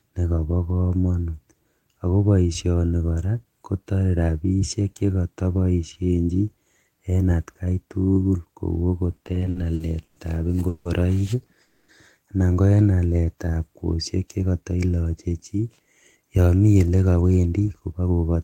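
From 9.11 to 10.18 s the speech shows repeated stalls (stutter): ten short gaps, the longest 120 ms, totalling 290 ms of continued sound, about 27% of that span. Packets arrived too slowly to keep the jitter buffer fed, so the speech drags and judders without losing content.

Two call audio freezes follow, at 10.68 to 10.87 s (170 ms) and at 11.61 to 11.90 s (270 ms), the second just before "anan ko en". Each sounds like the last sound held as a buzz that fades, then the speech resumes where it stopped. The likely cause is delayed packets emptying the buffer, which pushes everything after each freeze later.

After "anan ko en", from 12.95 to 13.52 s, a jitter buffer slow-down plays the speech at about 83% speed with pitch unchanged. The receiver repeated single pitch periods to rebuild its reserve, adding 107 ms and stretching the sounds.

From 15.29 s to 18.36 s a jitter buffer speed-up runs the speech at about 112% with pitch held. 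The buffer held more audio than it aims for, so small pitch-period pieces were cut, around 0.4 s in all, and the delivery sounds hurried.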